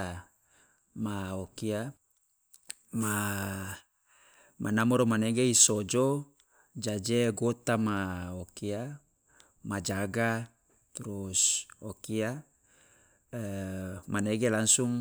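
Nothing in this speech recording stands out as a technical fault; there's nothing to flag at any point.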